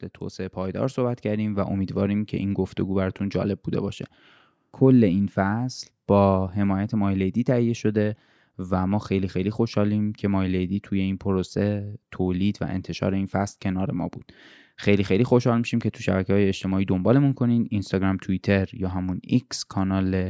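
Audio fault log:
0.18–3.98 s, automatic gain rising: the speech and the room noise behind it swell together by about 9 dB over nearly four seconds, as the automatic gain control judged the input too quiet and raised its level step by step until settling.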